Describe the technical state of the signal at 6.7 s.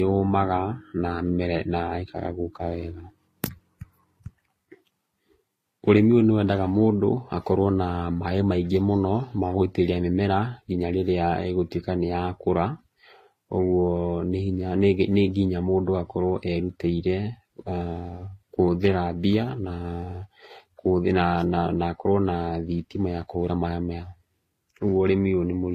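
Transcoding between lossy codecs is present at 6.7 s, as it is across the whole clip. The speech has nothing above about 14.9 kHz. A low-rate, HE-AAC-style coding smear sits underneath a second, Vorbis-like layer of coding artefacts. The likely cause is that the audio was squeezed hard by one codec and then re-encoded by another. The second pass spent its bits reproducing the first pass's damage while adding its own, so both kinds of artefact are heard together.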